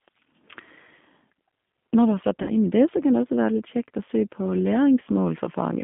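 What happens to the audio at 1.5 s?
At 1.5 s the speech carries G.729 codec damage, present throughout: a frame-based model rebuilds the sound as rough and synthetic, and a spectrogram shows nothing above 3.5 kHz.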